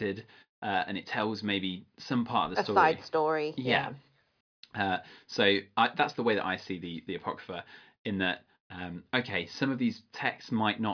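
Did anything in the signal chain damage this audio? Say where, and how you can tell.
No, nothing in the signal chain audibly damaged this speech recording. No stage in the chain leaves an audible mark on the sound.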